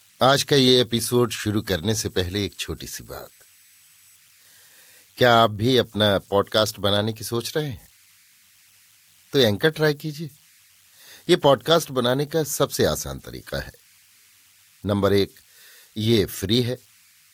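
Running right through the speech there's a faint whistle, somewhere around 2 kHz, sitting about 36 dB below the signal. Those are converter idle tones: the delta-sigma converter wasn't dithered, so whenever the input got small it locked into repeating bit patterns, and those patterns come out as a tone. You catch it as a thin whistle in the pauses, and as a gritty, grainy layer under the quieter stretches.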